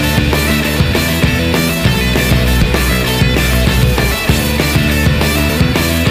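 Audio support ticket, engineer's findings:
Compressed frames skipped. Audio jumps ahead at 1.12 s and 2.63 s, each dropping roughly 20 ms, about one frame. Longer jump at 5.48 to 5.50 s, roughly 70 ms gone, about three frames. Probable component: decoder or file integrity. Frames either missing from the stream or rejected as damaged. Step size fits frames of about 23 ms. Each join is audible as a discontinuity where the skipped audio should be.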